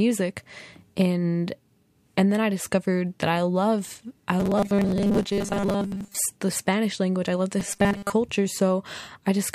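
A speech clip in which the voice twice collapses into a rigid, metallic buzz pitched at 200 Hz: from 4.40 to 6.17 s, just after "that I love I", and from 7.60 to 8.12 s, after "language I love the". This is robotic sound from repeated short buffers, likely from audio arriving too seldom, so a 5 ms slice is looped for most of each stretch while the real sound is skipped.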